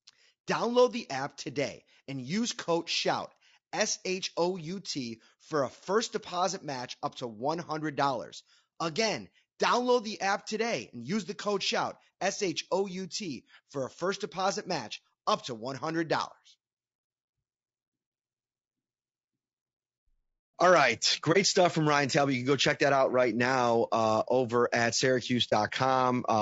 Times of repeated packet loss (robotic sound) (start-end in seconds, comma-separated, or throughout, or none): none